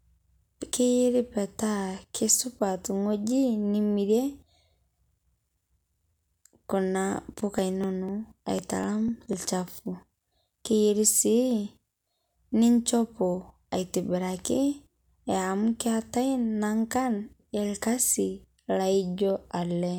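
Speech with periodic USB or driver dropouts from 7.34 to 9.33 s: about 1 ms skipped every 0.25 s, giving regular ticks, unlike randomly timed clicks.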